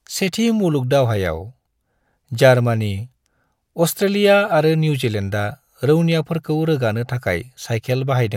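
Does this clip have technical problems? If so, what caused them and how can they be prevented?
No technical faults are audible.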